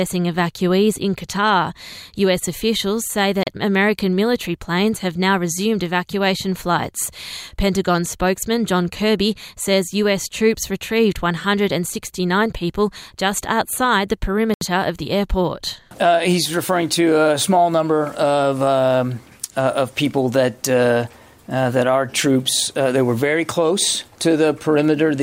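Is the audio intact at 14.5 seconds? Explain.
No. From 14.54 to 14.61 s the sound cuts to silence for about 73 ms, then resumes. This is most likely a Bluetooth stall: radio interference delayed packets to the headphones, their buffer emptied, and playback paused until the resent data arrived. The gap is true silence with the sound stopping and restarting cleanly. A codec dropout masked by concealment would instead fill the hole with smeared or repeated sound, and a click would be a brief spike rather than a gap.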